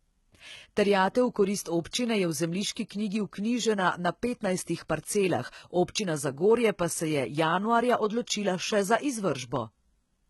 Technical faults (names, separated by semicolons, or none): HE-AAC compression; pre-echo